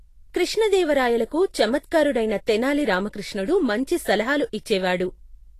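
From start to finish the speech carries plainly audible Vorbis compression damage. Nothing is present above roughly 14.2 kHz, and the upper band that remains sounds hissy and grainy rather than detailed, with consonant onsets smeared and tonal parts roughened. The likely cause is a low-quality Vorbis encode, where the treble residue is quantised so coarsely that fine structure turns into noise of similar energy. The degree of damage fits a bitrate somewhere around 34 kbps.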